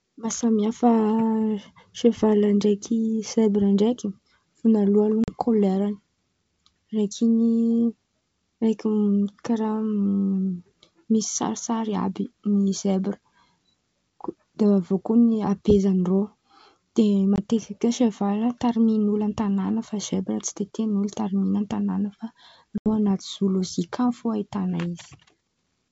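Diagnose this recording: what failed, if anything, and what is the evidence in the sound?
Network stage: packet loss on an ADPCM call. Hard silent gaps at 5.24–5.35, 17.36–17.38 and 22.78–22.87 s leave the decoder's adaptive predictor out of step.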